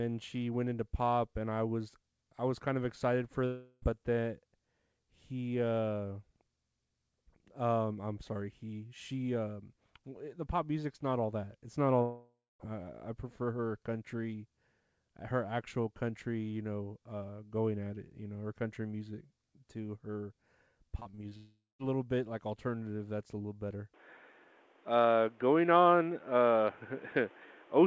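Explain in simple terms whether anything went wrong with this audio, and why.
Yes, several things went wrong.

Long network dropout: at 3.46–3.84 s, 12.02–12.61 s and 21.37–21.81 s the sound likely stopped arriving. Each gap is bridged by a fading continuation of the last sound. The second and third then fall briefly silent. Those stretches are lost for good, not just quieter.

Repeated packet loss (robotic sound): from 20.99 to 21.33 s, just before the third dropout, five tiny holes (none longer than about 0.02 s) are patched in quick succession. That gives a choppy stutter rather than one clear break. This is how it differs from a long dropout.

Input switched to a poorer device: from 23.94 s to the end, the recording likely changes to a lesser microphone. There is no pause at the switch. The sound suddenly turns duller, with nothing above 3.8 kHz, and shifts a little in loudness. It also gains faint background noise. 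Unlike a dropout, nothing goes missing. The tone itself changes.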